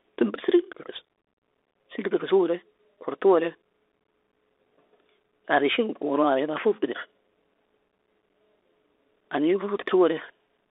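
From start to finish the speech sounds boxed-in and thin, confined to roughly 300 Hz to 3.6 kHz, with scratchy s sounds and a grainy hiss underneath. This is the Bluetooth CVSD headset codec: its one-bit up-or-down steps, fitting a 64 kbps stream, cannot keep pace with fast high detail.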